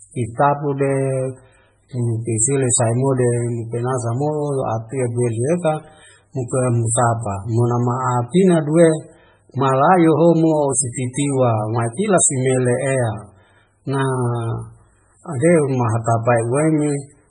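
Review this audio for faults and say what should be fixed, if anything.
Throughout the speech, nothing is heard above 10.2 kHz. Heavy watery, swirling artefacts smear the sound. This is likely MP3 compression at a very low bitrate, around 16 kbps.

From 11.13 to 11.16 s, pre-echo puts about 26 ms of hiss ahead of a sharp attack. The codec spread its block's noise into the quiet lead-in.

To prevent both, encode at a much higher bitrate or keep the audio in a lossless format.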